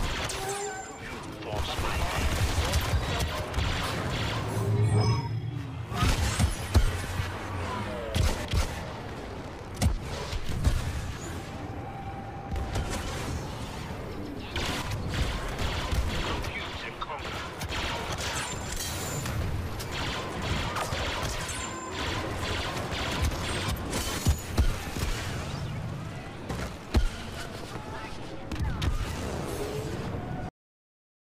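The audio runs along and then simply quits at about 30.49 s, right in the middle of a sound, with nothing trailing off after it. What you're hearing is a cut-off end: the final stretch of buffers never got written out, so instead of decaying naturally the signal falls straight to digital silence and sits there for the last 0.75 s or so until the file ends.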